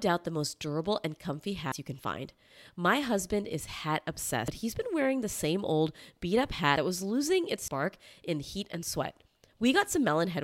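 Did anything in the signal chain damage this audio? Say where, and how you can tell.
Yes. Dropped buffers (overrun) at 1.72, 4.48, 6.76 and 7.68 s: each jumps the speech ahead, roughly a tenth of a second (about 70 ms at 6.76 s), with no silence, likely from the driver buffer being overwritten before it was read.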